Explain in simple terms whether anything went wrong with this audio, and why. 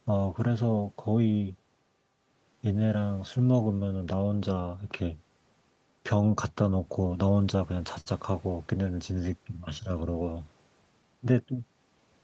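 A few timing problems run through this speech, all tied to one root cause.

The main one is clock drift between sender and receiver. The sending device's clock ran slower than the receiver's, by about five percent. The receiver's buffer, which holds a little audio in reserve, kept running low as a result, because audio arrived a bit more slowly than it was being played out. That mismatch lasts the whole clip, and the next two problems both come from it.

The repeated timing corrections are how the receiver coped. From about 0.10 s to 12.02 s it kept repeating tiny slices of sound to stretch things out and stay in step, which added roughly half a second in total. The playback runs at about 96 percent of normal speed. You'd hear this, if at all, as a slightly uneven, dragging pace with small hiccups scattered unevenly through the speech.

There's also a short stall from a late packet at about 8.01 to 8.08 s. 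A chunk of audio didn't show up in time, so the receiver held the last bit of sound for 53 ms until it arrived, then picked up where it left off. Nothing is actually lost, but that moment sounds briefly frozen or stretched, maybe with a faint buzz.

Separately, the call link cuts everything above 8 kHz, so the speech lacks some top-end crispness.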